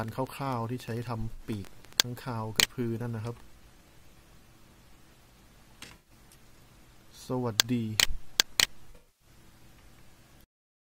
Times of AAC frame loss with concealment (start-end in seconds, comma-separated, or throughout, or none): 1.33-1.41, 5.85-6.10, 8.90-9.28